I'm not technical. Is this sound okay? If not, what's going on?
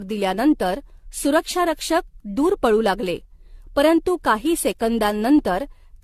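No. The speech has generation loss throughout the clip: it sounds swirly, hollow and smeared, with consonant onsets blurred and nothing above about 14.3 kHz. It was likely compressed and re-saved in a lossy format about seven times, each pass adding fresh damage.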